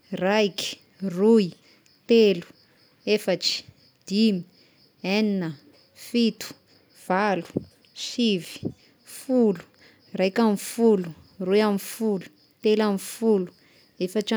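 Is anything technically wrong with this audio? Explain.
No, nothing technically wrong turns up anywhere in this speech recording, so there's really nothing here to flag.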